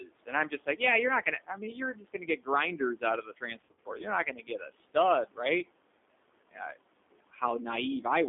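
Throughout the clip, noise suppressor artifacts are present. The suppressor pulls the steady room noise, which sits about 18 dB below the speech, down by about another 18 dB in the gaps, then lets it back up under each phrase. The background therefore pumps with the speech. That level-following behaviour distinguishes it from codec damage, which stays the same whether or not anyone is talking.

The whole clip also carries plainly audible G.729 codec damage. The line is squeezed to roughly 250 Hz to 3.6 kHz, so the speech is muffled and thin. The 8 kbit/s model rebuilds every 10 ms frame from a filter, a pitch predictor and a few pulses, which makes the speech rough and slightly synthetic. The leftover noise takes on a gurgling texture that has a different character from the suppressor's flutter.

From 0.0 to 0.81 s, the noise suppressor cuts speech for about a third of a second in total, dropping it by up to about 17 dB. 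A longer stretch from 2.79 to 5.69 s loses about a second of speech in total, at up to about 18 dB. Shorter cuts follow from 6.51 to 6.8 s (about 18 dB) and from 7.12 to 7.42 s (about 16 dB). In each case, soft consonants and word endings sink with the background and sound swallowed. The speech is turned down, not mangled, and the gain returns as soon as louder speech resumes.

Inside the long cut, from 3.61 to 3.9 s, VoIP packet loss is concealed by the speech codec. About 140 ms of signal goes missing, scattered over 240 ms, with no gap longer than 40 ms, which fits several lost packets spread across the stretch. The decoder fills each hole by extending its last pitch and filter, so the speech briefly smears into a stretched, fading sound. Because each frame builds on the previous one, the speech stays weak and distorted for a moment after the loss ends. The stretched sound separates this from a suppressor cut, which only makes the speech quieter.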